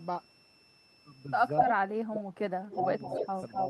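A switching supply whistle runs through the whole clip, a thin steady tone between 2.64 and 2.69 kHz sitting roughly 25 dB below the speech. It comes from a power supply whose switching has dropped into the audible range.

From 1.58 to 1.73 s an echo leak brings back a delayed copy of the speech about 250 ms late, briefly louder than the direct sound by around 5 dB. It is likely caused by a far-end echo canceller letting loudspeaker pickup through. It returns at 2.69 s and runs to the end at the same delay, now about 5 dB under the speech.

Speech suppressed in double talk follows at 1.8 to 2.32 s, where the voice sinks by as much as roughly 30 dB. Shallower dips of about 15 dB at 2.49 to 2.85 s and about 5 dB at 3.1 to 3.27 s come next. These are likely an echo canceller ducking the talker along with the loudspeaker echo during overlap.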